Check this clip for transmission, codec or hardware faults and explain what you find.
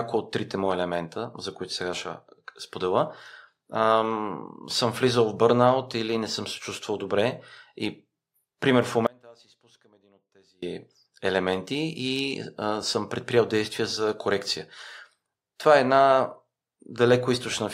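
One fault stands out: an audio dropout to a faint residue from 9.07 to 10.63 s. For about 1.6 s the speech falls abruptly to a faint trace roughly 30 dB down, likely from a brief signal loss while the downstream path stayed live. The waveform collapses to a thin band, and the spectrogram shows a sharp-edged pale gap.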